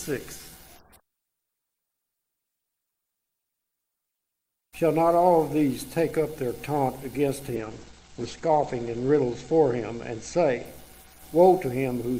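From 7.57 s to 10.71 s a call bitrate drop coarsens the Opus coding, consistent with a fall from about 48 to 12 kbps. Audio bandwidth narrows from 20 kHz to 8 kHz, sounding muffled and watery, worst for about 1.2 s before recovering.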